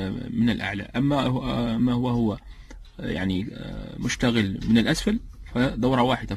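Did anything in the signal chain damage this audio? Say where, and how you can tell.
No, I can hear no damage from the signal chain.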